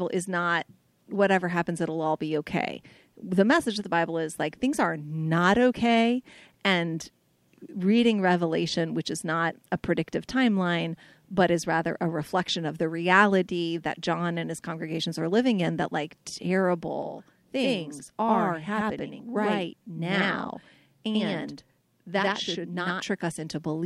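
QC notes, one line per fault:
17.0–23.0 s, channel delay (doubling): one channel runs about 93 ms behind the other, which fits a 4096-sample buffer, and the two are summed to mono. At that offset the ear no longer fuses the copies, so the speech carries a distinct slap echo at equal level, each syllable trailing a second onset. Comb filtering is secondary to the audible doubling. The effect stops cleanly at 23.0 s.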